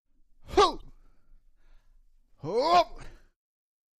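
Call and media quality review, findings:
Brief glitch at 0.77–0.83 s and again at 2.99–3.05 s, each about 55 ms. Damaged data in a compressed stream: corrupted bytes in the encoded frames, so the decoder misreads them, loses sync and resyncs at the next frame header.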